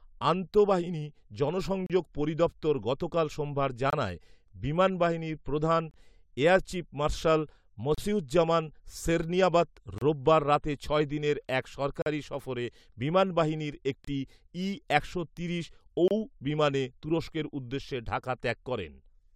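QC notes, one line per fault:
1.86, 3.90, 5.91, 7.95, 9.98, 12.02, 14.05, 16.08 s: gap between stream segments. Hard-edged silences of 25–42 ms recur every 2 s, which fits 2-second segments whose timestamps leave short holes. The player fills each hole with silence, and no audio is lost. The 1.86 s hole falls just before "পরিদফতর গতকাল সোমবার".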